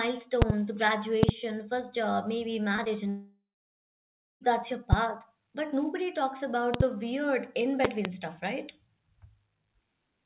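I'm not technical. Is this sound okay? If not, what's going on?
No. There are three separate problems.

Loud pops: sharp pops or thumps, far louder than the speech, at 0.42 to 0.52 s (two pops), 1.23 to 1.31 s (two, just before "first job maybe"), 4.93 s (one, right after "that's your"), 6.74 to 6.83 s (two) and 7.85 to 8.08 s (two). The speech carries on underneath each one. That is how they differ from the gaps below. The likely cause is an electrical jolt such as a plug, a switch or static.

Short concealed packet loss: at 2.76 s and 2.84 s, the second right after "first job maybe", about two hundredths of a second of the call never arrived. The receiver patched each hole by stretching the sound before it. You hear a quick smear or wobble, not a loud hit.

Long network dropout: from 3.10 to 4.43 s, about 1.3 seconds of audio never arrived. The last sound turns into a fading buzz, then there is about a second of silence, likely from a network interruption. 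When the speech comes back, the missing part is simply gone.

Separately, the audio has the muffled sound of an ordinary phone call, with nothing above about 4 kHz. That is how this kind of call line normally sounds, so it is not a fault.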